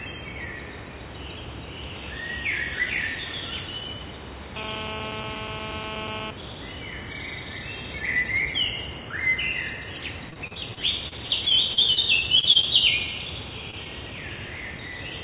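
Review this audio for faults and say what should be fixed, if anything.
GSM phone buzz runs from 4.56 to 6.31 s. A nearby 2G phone's 217 Hz transmit bursts are rectified by the audio circuit. The result is a steady, raspy buzz about 3 dB below the signal.

Repeated packet loss (robotic sound) affects 10.3 to 12.65 s. About a dozen holes, the longest 32 ms, are patched by continuing the previous sound. This gives choppy audio with pieces missing.

A short concealed packet loss at 13.71 to 13.74 s leaves a brief smear. About 20 ms never arrived and was filled by extending the last sound.

To prevent these, keep phones away from the recording gear, and use a larger jitter buffer or a more stable network link.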